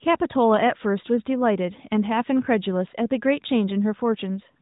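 The speech has no technical faults, and its path through the AMR narrowband mobile codec at 12.2 kbps is working as it should, with nothing passing above 3.8 kHz.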